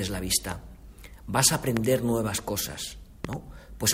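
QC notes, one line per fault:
0.52–0.54 s, 1.77–1.79 s and 3.25–3.35 s, loud pop: a sudden voltage step or pulse, likely from a plug, switch, static or driver glitch, enters the signal path. It gives sharp pops about 15 to 20 dB above the sound, two in quick succession at 3.25 s, while the sound carries on underneath.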